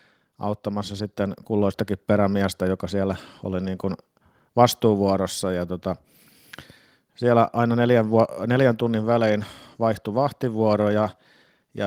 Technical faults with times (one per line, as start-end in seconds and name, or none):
0.62-1.86 automatic gain rising